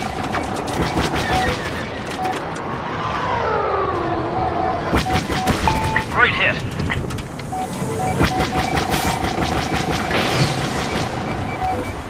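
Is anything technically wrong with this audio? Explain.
No, no technical faults.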